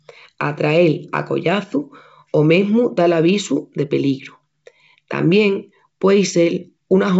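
Nothing technically wrong can be heard in this speech recording, which carries the band-limited character of G.722 wideband telephone coding at 64 kbit/s, with no content above 7.7 kHz.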